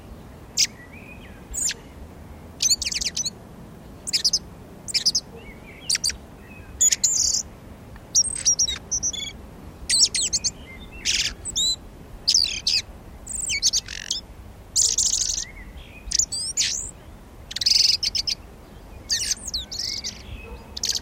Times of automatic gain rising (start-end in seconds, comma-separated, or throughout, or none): none